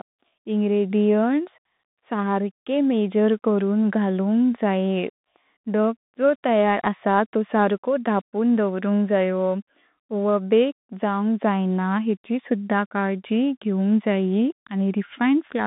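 Speech squeezed through a Bluetooth CVSD headset codec the whole way through: nothing above about 3.8 kHz, a thin 150 Hz to 3.7 kHz band, and a one-bit up/down coder whose step can't keep up, so sibilants go scratchy over granular hiss, which fits a 64 kbps stream.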